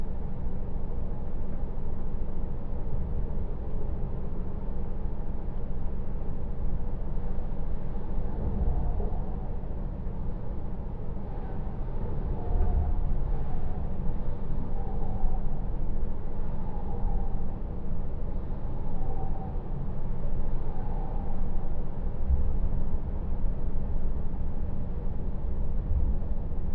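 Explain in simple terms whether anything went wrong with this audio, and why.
Wrong sample rate: throughout, the audio plays at half speed and a full octave low, which fits playback at about half the rate it was recorded at.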